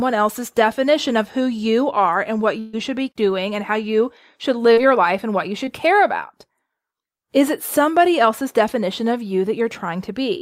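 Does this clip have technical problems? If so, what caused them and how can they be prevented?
Yes, the speech has two kinds of network-related problems.

Burst of packet loss, 2.59 to 2.75 s: a run of packets was lost or arrived too late to play, so about 140 ms of audio never reached the decoder. The receiver filled the gap by extending the last sound for about 135 ms and turning it down as it went. This produces a held, fading continuation instead of real speech, and the audio resumes with that stretch missing. A larger adaptive jitter buffer, forward error correction or redundant packets, and a steadier network path would prevent this.

Short concealed packet loss, 4.73 to 4.79 s and 5.65 to 5.69 s: smaller holes of about 40 ms and 20 ms opened when a packet failed to arrive in time. Each time, the decoder synthesised a stand-in from the sound just before it and blended back into the real audio. 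That leaves a brief smear or wobble, and a short sound falling inside the gap can disappear. The same measures prevent it, especially in-band forward error correction and reducing jitter on the link.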